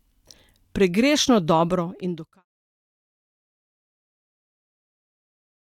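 Speech with no technical faults.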